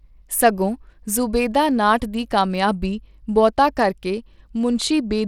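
Throughout the speech, a gritty, plainly audible grain rides on the sound and the upper bands flicker. A spectrogram shows a hard, flat ceiling at 17.6 kHz with patchy treble beneath it, likely Bluetooth SBC compression at a rate consistent with 96 kbps.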